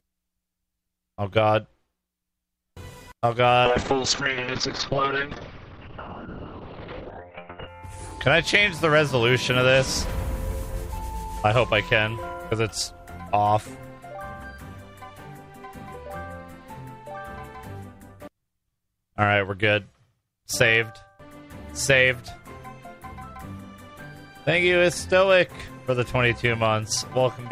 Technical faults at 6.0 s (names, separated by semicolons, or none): call bitrate drop